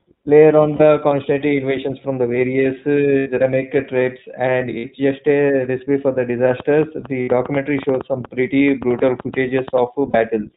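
The whole clip sounds thin, slightly rough and synthetic, with nothing above 4 kHz. That is the iLBC codec at work: it is a narrowband VoIP codec that codes each short frame's excitation independently, discarding the upper band and flattening fine detail. The plainly audible damage fits its 15.2 kbps mode with 20 ms frames.

At 0.76 to 0.82 s, a brief held, faintly buzzy vowel-like sound replaces the speech for 40 ms. These are lost iLBC frames. Packets went missing and the decoder filled the gap by repeating the last pitch cycle blended with noise. Because each frame stands alone, the speech snaps back almost immediately. The same happens at 3.18 to 3.28 s, the longest gap at 80 ms, then at 4.78 to 4.85 s (60 ms).

From 6.51 to 9.79 s, a train of clicks of similar shape ticks over the speech at an uneven pace, averaging about 6.7 per second. There are roughly twenty of them, peaking around 10 dB above the signal. 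The likely cause is interference from nearby equipment or a faulty connection or power supply injecting repeated pulses.

Within that stretch, another lost iLBC frames gap appears at 7.22 to 7.30 s, a 60 ms buzzy hold. A final 40 ms concealment follows at 10.10 to 10.16 s, again recovering at once.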